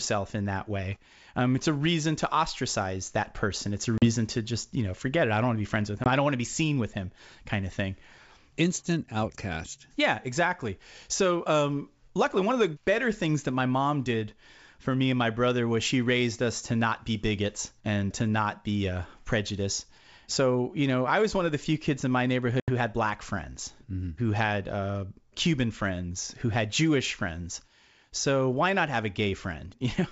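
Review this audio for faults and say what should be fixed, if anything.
Packet loss on an ADPCM call hits this speech at 3.98–4.06 s (40 ms missing, just before "to just you know"), at 6.04–6.09 s (20 ms, between "to be friends with" and "I don't want to"), and at 22.60–22.70 s (80 ms, between "few kids in my" and "had black friends"). Each gap is hard-edged silence, and on resumption the decoder's adaptive predictor and step size no longer match the sender's. The return is therefore slightly distorted for some tens of milliseconds. The gaps sound like the loss of about two packets, one packet, and roughly four packets. The underlying wideband G.722 coding, consistent with the full 64 kbit/s mode, adds little or no audible damage of its own. Prevention: carry the call over a jitter buffer with packet-loss concealment and decoder state resynchronisation, or add redundancy or FEC, so lost frames are bridged rather than silenced.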